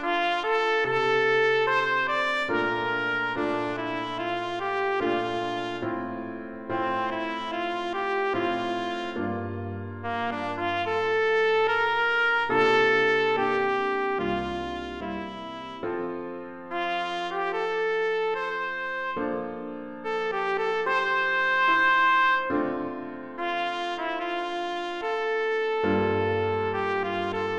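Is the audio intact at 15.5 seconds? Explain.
Yes, the audio is intact at 15.5 seconds, with no dropout, click, distortion or other technical fault at that moment.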